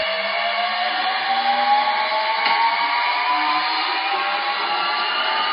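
MP3 compression damage runs throughout, from start to end. There is nothing above 5 kHz, so the top is cut off flat, and the remaining audio has a watery, swirling quality with metallic chirping where fine detail comes and goes between frames. This is likely the result of encoding at a very low bitrate, which fits roughly 24 kbps, where the encoder drops the treble and zeroes quieter frequency lines it cannot afford.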